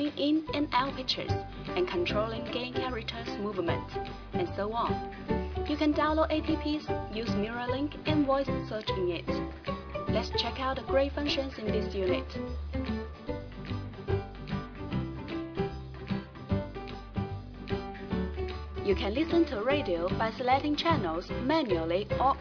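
No technical faults are audible.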